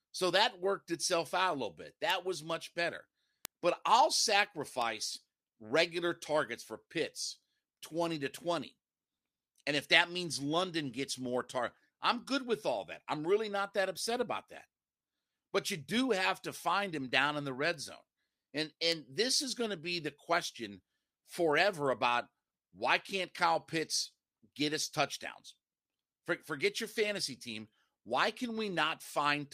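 Single sharp, broadband ticks at 2.10, 3.45, 4.82, 17.74 and 18.92 s, peaking at about -14, -8, -20, -38 and -14 dBFS: bit error spikes, where a flipped bit briefly throws one to three samples off by a power of two.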